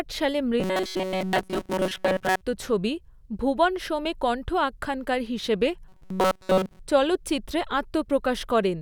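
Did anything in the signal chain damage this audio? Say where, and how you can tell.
Yes, robotic sound from repeated short buffers from 0.6 to 2.41 s, before "ছবি 'ভুবন সোম' এ", and 5.89 to 6.79 s, after "এ কণ্ঠ আখ্যানকার হিসেবে": a rigid 188 Hz buzz, likely a driver or buffer underrun looping about 5.3 ms blocks.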